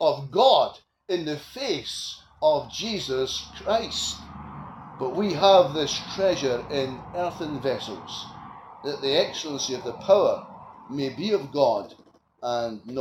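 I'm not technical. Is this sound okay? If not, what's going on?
No. At 7.29 to 7.31 s there is a very brief glitch, a split-second disturbance in the sound. This is damaged data in a compressed stream: a tiny piece of the stored file was corrupted, so the player stumbled there before picking the sound back up.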